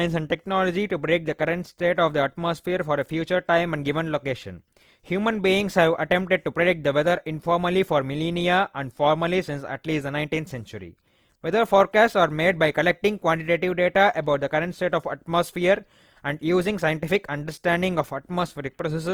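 Right from the start and all the way through, the speech has a grainy, rough edge: tonal parts of the voice turn noisy rather than smeared or swirly. That's likely Opus compression in its music-oriented CELT mode. When the encoder runs short of bits, it fills bands with folded or noise-like content. The damage is plainly audible, which fits a low bitrate around 24 kbps, even though the audio still reaches up to about 20.2 kHz.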